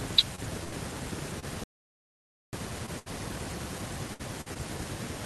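Repeated packet loss (robotic sound) runs from 0.35 to 3.08 s: seven short holes, the longest 78 ms, were each patched by stretching the preceding speech. About an eighth of the stretch is synthetic fill, so the speech turns choppy, with pieces missing. Inside that stretch, an audio dropout to silence from 1.64 to 2.53 s cuts the speech to silence for about 0.89 s, with no room tone, most likely because the input link failed while recording continued. Repeated packet loss returns from 4.14 to 4.57 s with three holes, the longest 53 ms. Roughly a quarter of that span is concealment, which makes it choppy.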